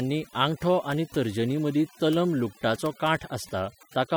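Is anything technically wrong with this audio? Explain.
Yes. Overdone noise removal runs through the whole speech clip. Bands near the estimated noise floor are pushed almost to zero, taking quiet speech detail with them, so the background becomes near silence with twinkling specks. A spectrogram shows dark gaps scattered with isolated bright dots.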